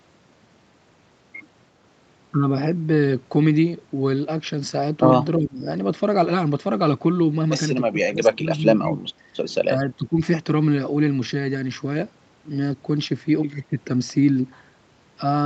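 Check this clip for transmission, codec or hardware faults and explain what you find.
The main problem is the speech being pulled down in short stretches, which sounds like speech suppressed in double talk. It happens four times: 5.37–5.66 s (dropping by about 20 dB), 7.91–8.95 s (around 15 dB, patchy over roughly 0.7 s of that span), a brief 9.18–9.22 s dip of about 10 dB, and 9.76–10.2 s at around 15 dB. The likely cause is an echo canceller facing both sides talking at once. Unable to separate the local talker from loudspeaker echo, it ducked everything, so the speech sags and breaks up in pieces. Nothing in the audio extends above 8 kHz, which fits the wideband limit of an Opus call path.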